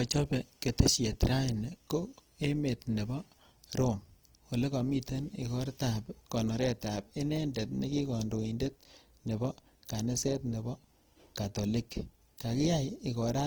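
Speech with Opus compression throughout: the voice sounds grainy, rough and noisy, yet the spectrum stays full up to about 20.4 kHz without the swirling holes of MP3. That points to Opus's CELT music mode, likely at around 16 kbps.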